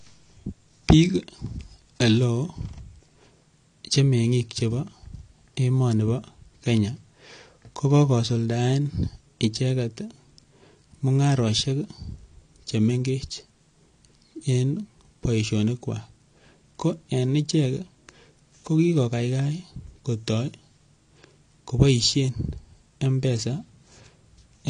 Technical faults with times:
0.00-24.70 AAC compression

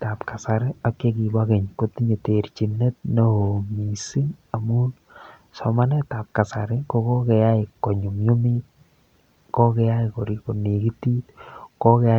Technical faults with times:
none

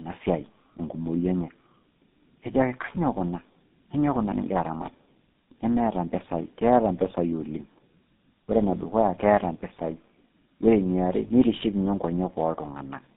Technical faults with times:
0.00-13.16 tandem speech coding

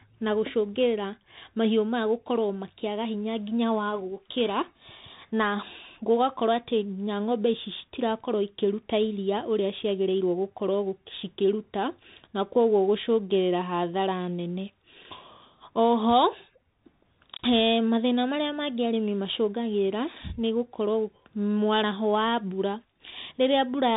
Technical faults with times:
0.00-23.96 Bluetooth CVSD headset codec

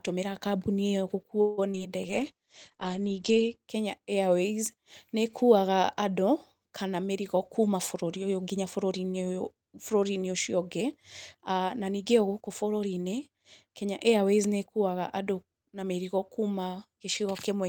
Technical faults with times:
1.41-1.60 call audio freeze
1.72-1.82 short concealed packet loss
2.08-3.66 call bitrate drop
6.88-8.92 jitter buffer speed-up

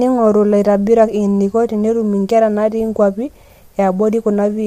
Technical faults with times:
0.00-4.66 low-delay AAC compression

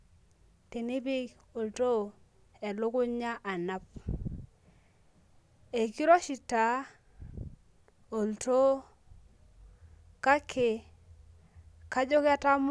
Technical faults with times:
none

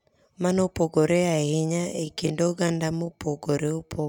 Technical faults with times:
0.98-4.09 time-stretched section

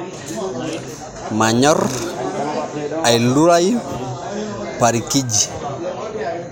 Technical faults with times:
none

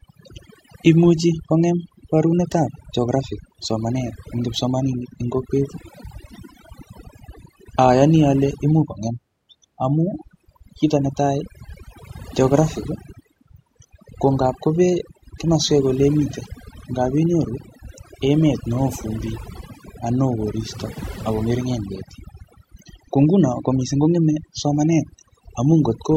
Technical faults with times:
0.00-26.17 overdone noise removal

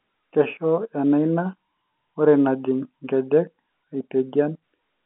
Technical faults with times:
none

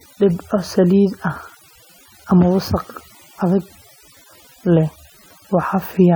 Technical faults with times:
0.00-6.15 overdone noise removal

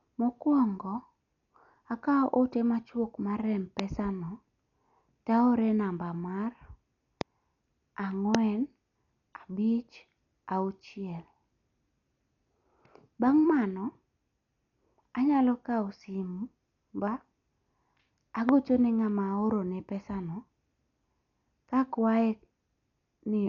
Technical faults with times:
0.00-23.48 Dolby Digital compression
3.79-3.81 loud pop
7.21-7.23 loud pop
8.35-8.37 loud pop
18.49-18.51 loud pop

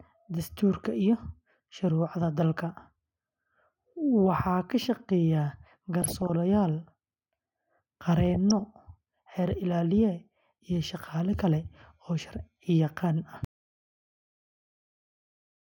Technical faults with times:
6.02-6.30 DAB burbling
8.30-8.60 DAB burbling
13.45-15.77 audio dropout to silence

